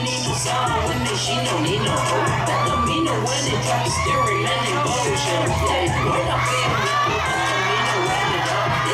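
Something in the chain likely began injecting a regular pulse, such as interference from nearby equipment or a faulty connection or power supply. The result is a train of clicks from 4.46 s to 8.79 s: around thirty near-identical clicks, evenly spaced at 6.93 per second. Each click peaks at about the level of the sound itself, so the steady ticking stays audible over the sound and through any quieter moments until the run stops.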